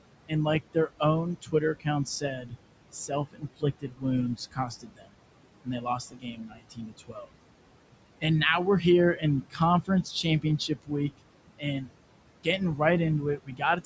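Noise suppressor artifacts run through the whole clip. The background room noise, sitting about 13 dB below the speech, is pulled down by about 21 dB in the gaps and then rises back under each phrase. A steady hiss would stay put, but this noise breathes with the speech.

Speech cut by the noise suppressor comes in three stretches: 0.28 to 7.28 s, 8.81 to 11.89 s, and 13.38 s to the end. The suppressor mistook soft parts of the speech for noise and turned them down by up to about 22 dB. Across those stretches, roughly three seconds, then well under a second, then a brief moment at the close, endings and quiet consonants sound swallowed. A dropout would go fully silent, but these parts only fade along with the background.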